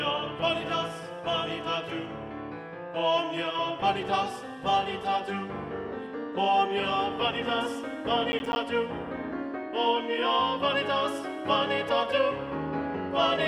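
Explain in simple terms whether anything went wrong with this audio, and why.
Around 8.32 to 8.56 s there's a burst of processor overload crackle: the computer missed a handful of short, roughly 10 ms deadlines, leaving tiny silent gaps.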